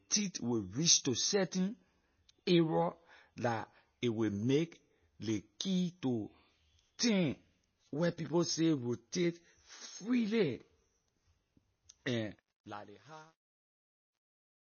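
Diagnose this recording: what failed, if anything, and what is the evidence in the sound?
The codec stage is the weak point: the audio was likely squeezed through low-bitrate MP3 compression, consistent with about 24 kbps. Nothing survives above 6.6 kHz, and throughout the clip the speech has plainly audible watery, swirling artefacts where weak frequency lines drop in and out between frames.

From 12.35 s to the end at 14.69 s, a digital fade was applied without dither, producing truncation distortion on a fade. The gritty stepping fits a word length near 11 bits. It is worst from 12.87 s onward, where the quiet tail collapses into coarse square steps.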